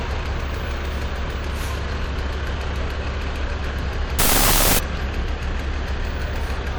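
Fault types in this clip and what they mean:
Wrong sample width: From 4.19 to 4.79 s the sound turns into loud, harsh noise with the original just audible underneath. The audio was stored as 16-bit integers but read back as unsigned 8-bit values. Each real sample is split into two, so the bytes no longer line up. Only the high bytes still follow the true waveform. The low bytes add dense noise. The buried sound plays at half speed, so it sits an octave lower.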